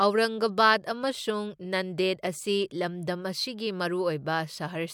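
No audible fault occurs anywhere in this speech recording.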